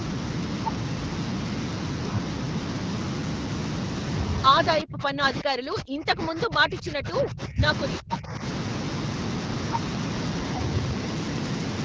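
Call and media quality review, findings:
Speech suppressed in double talk, 4.82–7.63 s and 7.99–8.42 s: speech dips by up to around 30 dB and breaks up. Likely the echo canceller confusing near-end talk with loudspeaker echo during overlap, attenuating both.

Train of clicks, 9.75–11.8 s: about twenty similar ticks at an irregular pace near 8.35 per second, roughly 10 dB above the speech. Likely interference or a faulty connection or power supply injecting pulses.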